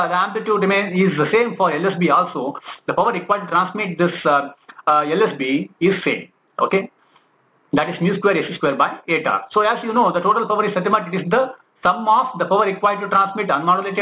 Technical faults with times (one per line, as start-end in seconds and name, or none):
0.00-14.02 aliasing